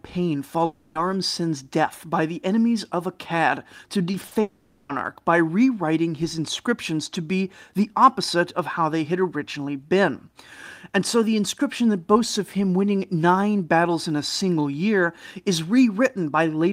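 From 0.65 to 0.97 s the speech stalls into a fading buzz that continues the last sound, likely a long network dropout, with 0.3 s lost. Between 4.11 and 4.37 s, repeated packet loss leaves four patched gaps of up to 40 ms, giving choppy, robotic speech. From 4.41 to 4.91 s a similar buzz fills a likely second long network dropout, with 0.48 s of speech lost before "by rewriting his inscriptions".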